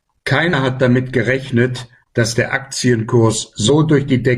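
Brief glitches break through the speech at 0.49 to 0.54 s and 3.65 to 3.70 s: damaged data in a compressed stream, where corrupted frames throw the decoder out of sync until it finds the next valid header.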